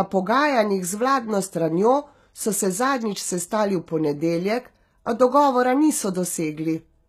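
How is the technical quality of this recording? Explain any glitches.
The speech has plainly audible codec damage throughout. Nothing comes through above 14.9 kHz. The likely cause is HE-AAC compression at a low rate, around 20 kbps. The treble is rebuilt from copied lower bands, not the original. So s sounds come out gritty and metallic.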